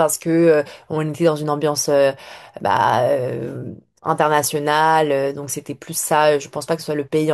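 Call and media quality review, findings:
Nothing to flag on this speech recording; no problems turned up in the call or media path.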